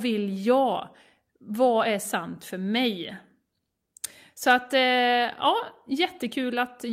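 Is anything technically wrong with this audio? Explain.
No, nothing in this speech recording points to a technical fault. There is no moment in it that calls for an explanation.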